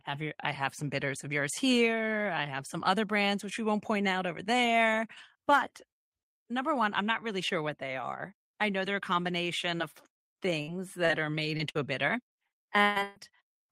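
Repeated packet loss (robotic sound) at 9.77–10.69 s, 11.05–11.80 s and 12.28–13.17 s: lost audio is patched by stretching the preceding sound, leaving choppy speech with pieces missing. The final burst is worst, with gaps up to 141 ms.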